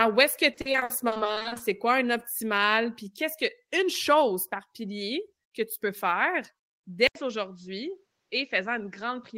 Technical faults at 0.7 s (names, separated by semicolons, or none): repeated packet loss (robotic sound)